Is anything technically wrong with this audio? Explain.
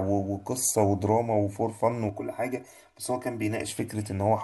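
Yes. From 2.09 to 3.68 s the speech turns hollow and phasey, the sound of channel delay (comb filtering). One channel runs around 3 ms behind the other, and when the two are summed to mono, shared content cancels at evenly spaced frequencies, with the first notch near 150 Hz and more above it. The notches stay put rather than sweeping, which separates this from flanging, and there is no added tail as room reverberation would give.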